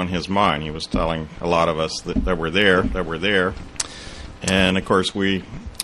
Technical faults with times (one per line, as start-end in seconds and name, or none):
2.72-4.70 doubled audio track